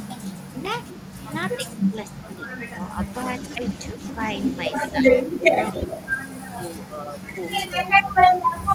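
Speech clip where the voice gets speech suppressed in double talk: it dips at 1.69–2.2, 3.95–4.16, 5.03–6.0, 6.5–8.2 and 8.51–8.69 s, anywhere from a slight sag to a deep drop, likely an echo canceller ducking this talker while the far end speaks. There's also echo leak from 3.13 to 6.14 s, a faint copy of the voice trailing about 224 ms behind and roughly 15 dB down, likely loudspeaker pickup the far-end canceller didn't fully remove.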